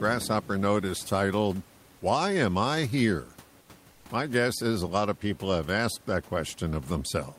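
Comfort noise in place of the background at 3.61–3.69 s and again at 3.91–4.05 s, gaps of 80 ms and 140 ms: the room noise, which sits about 27 dB below the speech, drops out and a steady, featureless hiss takes its place, about 6 dB quieter in the first gap and about 3 dB in the second. The likely cause is discontinuous transmission pausing the sender in these silences, with the receiver synthesising noise, which fits Opus DTX.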